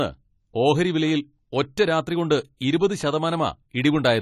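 AAC compression is the likely cause of the damage heard throughout the speech, from start to finish. Nothing is present above about 14.1 kHz, so the top end sounds dull and closed in. The encoder splits each frame into many frequency lines and spends too few bits on them, leaving gaps and smearing between bands. Sibilants turn fizzy and sustained vowels warble, a plainly audible texture that points to a low bitrate of around 32 kbps.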